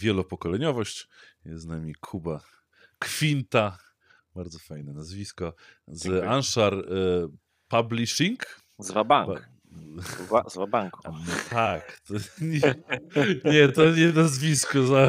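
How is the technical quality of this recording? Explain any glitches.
There is one glitch, a time-stretched section. From 11.36 s to the end, the speech slows to about 0.62 times its pace while the pitch holds. Software likely stretched the audio by repeating short pieces. The result drags.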